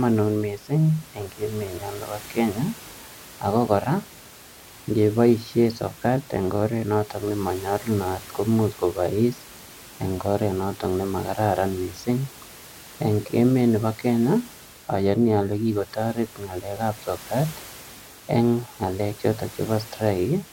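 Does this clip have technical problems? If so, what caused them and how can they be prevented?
No, the speech signal shows no technical problems, and the only other sound is the room's own background noise sitting about 20 dB below the speech, which belongs to the recording itself.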